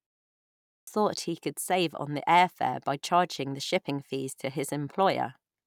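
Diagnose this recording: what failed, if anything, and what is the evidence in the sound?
At 0.53 s the speech snaps in abruptly out of silence, its opening missing until about 0.87 s, just before "thought he could save". That is a clipped start after a pause at the playback stage: the output device slept through the 0.53 s silence and needed about 0.34 s to wake, swallowing the first sounds.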